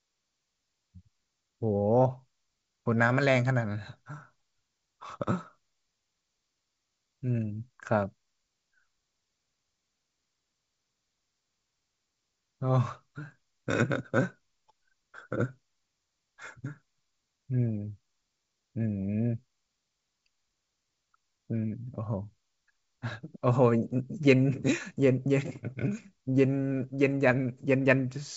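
No technical faults can be heard in this speech recording. It comes through G.722 wideband telephone coding, which keeps the speech clear up to about 7 kHz with at most a faint trace of the coding.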